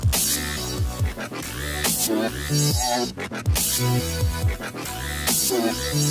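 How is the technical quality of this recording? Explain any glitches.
The recording is compromised by a speech-oriented noise suppressor acting on non-speech material.

Noise suppressor applied to music or sounds: present throughout. The processor treats sustained and ambient content as noise and turns it down while onsets pass, so level pumps by roughly 5 dB, and held sounds and tails thin and flutter rather than decaying smoothly.

Sound cut by the noise suppressor: from 3.12 to 3.40 s and from 4.65 to 4.80 s, the suppressor classed the sound as noise and pulled it down by about 6 dB and about 5 dB respectively. Each dip lasts only a fraction of a second and is heard as a brief sag in level.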